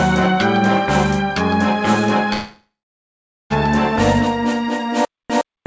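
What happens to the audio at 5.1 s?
From 5.05 s to the end, the audio falls into a stutter with silent gaps. A burst of about 116 ms plays, then about 246 ms of silence follows, and the pattern repeats every 362 ms. The likely cause is a stalled stream that replays its last fragment on each retry and then runs dry, so the audio meant for that stretch is lost. A plain loop repeats without pauses, and a dropout leaves silence without repetition. Here, identical bursts separated by even, empty gaps set this fault apart.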